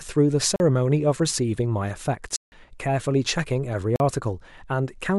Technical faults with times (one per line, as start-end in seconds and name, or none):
0.56-0.60 block of digital silence
2.36-2.52 block of digital silence
3.96-4.00 block of digital silence